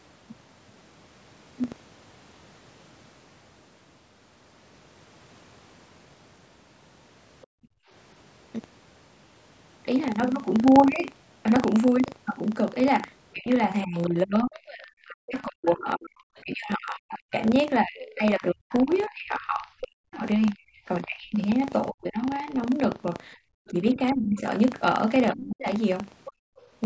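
Buffer tearing runs through the whole speech clip. Writer and reader of the ring buffer have slipped. A small slice of each period, a couple of percent, replays audio about 70 ms old. The result is a steady 25 Hz rattle under the speech.

From 7.46 to 7.89 s the background is gated by the echo canceller. It drops the room sound by about 37 dB while the loudspeaker plays, then releases.

From 13.34 to 22.54 s the speech dips and cuts out in pieces, for roughly seven seconds in total and by up to about 40 dB. The likely cause is speech suppressed in double talk, with both sides talking at once.

At 16.36 s a brief scrap of another voice appears, about 35 dB below the speech. This is likely the other side's voice leaking through the echo canceller.

At 23.37 s the background is gated again, briefly, by about 21 dB.

At 23.67 s a faint scrap of what is likely the other side's voice leaks through, about 30 dB down. 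Speech is then likely suppressed in double talk from 23.71 to 25.67 s. It drops in pieces, under a second in total, by up to about 30 dB.

At 26.25 s what is likely the other side's voice leaks through more strongly, about 20 dB below the speech. From 26.32 to 26.6 s the background is gated by about 34 dB.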